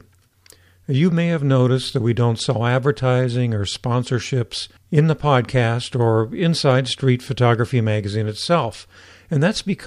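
At 6.71 s, dropped samples: a couple of samples were likely lost from the stream, so the speech waveform jumps abruptly, producing a single sharp click.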